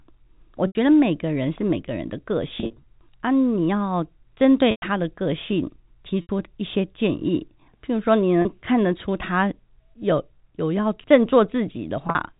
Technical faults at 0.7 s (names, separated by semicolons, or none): packet loss with pitch repetition